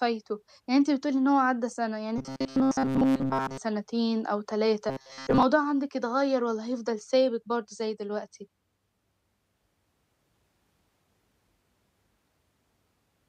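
From 2.18 to 3.58 s and 4.89 to 5.43 s, speech turns into a rigid 133 Hz robotic buzz, likely from repeated short buffers of about 7.5 ms. A spectrogram shows evenly spaced harmonic stripes.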